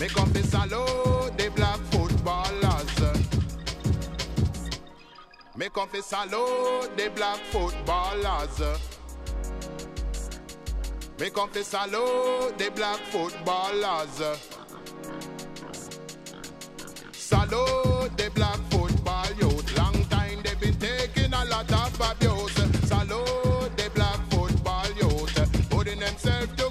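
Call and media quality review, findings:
No audible transport, device or processing defects found in the reviewed audio; signal path presents as stable throughout.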